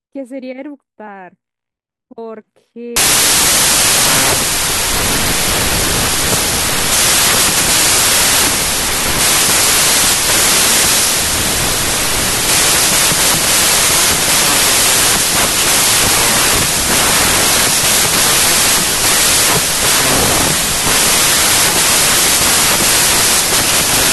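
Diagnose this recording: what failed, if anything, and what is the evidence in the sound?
Wrong sample width at the sample-format conversion stage: from 2.96 s the speech drowns in loud noise and runs slow and low, about 0.67x, since packed 24-bit data is being read as 16-bit.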